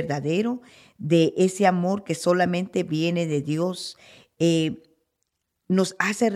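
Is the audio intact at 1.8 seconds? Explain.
Yes, the speech at 1.8 seconds is intact, with no dropout, click, distortion or other fault audible at that moment.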